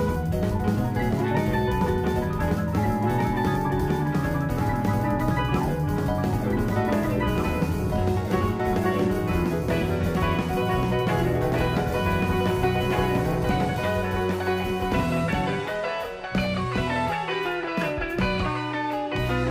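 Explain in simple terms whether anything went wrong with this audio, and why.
Something did go wrong: there is a doubled audio track throughout. A second, equally loud copy of the sound trails about two seconds behind, likely from a second, slower capture path. Unlike an echo, it never fades or sounds roomy.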